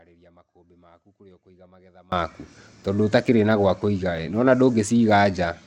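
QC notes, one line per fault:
0.00–2.12 s, audio dropout to a faint residue: the clip opens with the signal already gone, leaving only a faint leak of the speech roughly 30 dB below its normal level, then the full signal snaps back at 2.12 s. The return is an abrupt step, not a fade-in or a natural pause. The surviving residue shows the path stayed live while the wanted feed was cut, likely a momentary link or routing loss upstream.
Throughout, Bluetooth SBC compression: the speech carries a gritty, granular noise floor, and the top end is thin and unstable, with sibilance and upper harmonics dropping out and flickering back rather than sitting under a steady low-pass. That uneven, band-by-band treble loss with aliasing grit points to a coarse sub-band codec starved of bits, likely SBC at a low bit pool, which fits a rate near 96 kbps.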